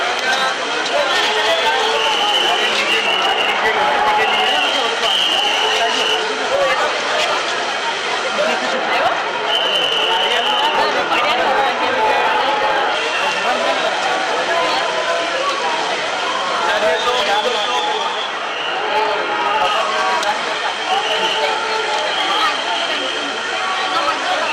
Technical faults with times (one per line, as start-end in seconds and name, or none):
0.00-24.53 hard clipping